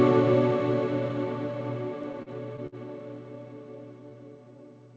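From 2.03 to 2.75 s the audio stutters. These are repeated stalls. Packets arrived late, so the jitter buffer ran dry five times. Each time the receiver stretched the last sound to fill the wait. About 122 ms was filled this way, roughly a sixth of that stretch. The longest wait was 55 ms. Nothing is lost. The sound just catches and drags in short hitches.

From 4.00 to 4.58 s there is a jitter buffer slow-down. The buffer needed more reserve. The receiver repeated single pitch periods and bits of pause to build it up. This adds 75 ms, so the passage plays at 88% speed. The pitch stays the same. Sounds are drawn out. Over the whole clip nothing reaches above 8 kHz, which fits a G.722 call path at 64 kbps.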